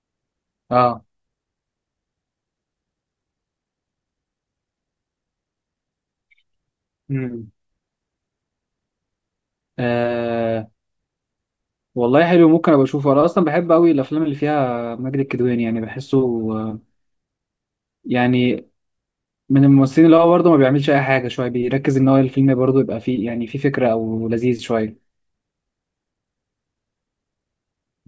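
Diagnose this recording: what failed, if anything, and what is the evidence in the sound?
Nothing failed: no stage in the chain, from wiring through converter, buffering, processing, transmission and storage to playback, leaves any audible mark on this speech recording.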